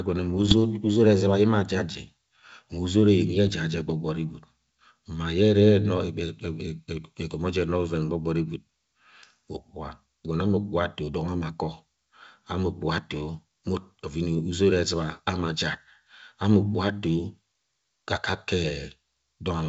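From 0.38 to 0.55 s and again from 3.47 to 3.53 s, the speech breaks into pops and rough, gritty bursts with brief jumps in level. These are bit errors on an ADPCM link, at a rate of a fraction of a percent. Each flipped bit throws off the decoder's step size and predictor, so the damage rings on for some milliseconds. That smeared ringing, rather than a clean gap or a single isolated click, sets it apart from packet loss. Outside these bursts the G.722 wideband coding stays clear.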